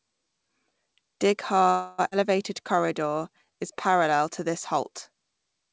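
At 1.70 s, packets were most likely held up in transit, and the jitter buffer ran dry. This is a call audio freeze. With nothing new to play, the receiver stretched the last sound it had into a fading buzz-like tail. That filler runs until 2.00 s, about 284 ms, and never drops to true silence. When the packets resumed, the speech picked up exactly where it had stopped. A gap was inserted, but nothing was lost.

From 2.10 to 2.13 s comes a skip ahead. A stretch of audio was dropped while later audio was already waiting. It dropped roughly a fifth of a second of speech and bridged the cut with only about 9 ms of filler. The result is an abrupt jump forward, with the speech on either side joined almost seamlessly and a piece of it simply gone.

From 2.62 to 4.91 s, the jitter buffer built up a reserve by repeating single pitch periods and bits of pauses over and over. This jitter buffer slow-down added 192 ms, so the speech plays at about 92% speed with its pitch unchanged. 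Sounds come out drawn out, sometimes with a faint warble. Throughout, the G.722 call codec leaves nothing above 8 kHz.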